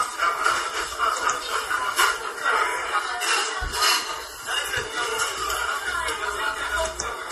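Throughout, the audio carries plainly audible MP3 compression artefacts, likely from a low-bitrate encode; the damage fits something near 40 kbps. Nothing is present above 13.9 kHz, and weak spectral detail flickers frame to frame, giving a watery, swirling texture with smeared attacks.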